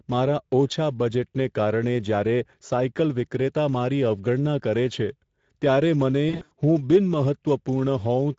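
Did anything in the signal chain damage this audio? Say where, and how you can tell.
Yes. At the codec stage, the whole clip carries Speex damage: the speech sounds hoarse and noisy, with plainly audible coding artefacts, which fits a mid-quality Speex mode near 16.8 kbps. CELP at that rate can't spend enough bits on the excitation, so the texture turns rough.

On the network side, there's VoIP packet loss concealed by the speech codec from 6.29 to 6.57 s. The voice is stretched out and fades, consistent with about 200 ms lost across 280 ms, longest gap 80 ms. The decoder extrapolated pitch and filter, and the speech stays weak briefly after recovery.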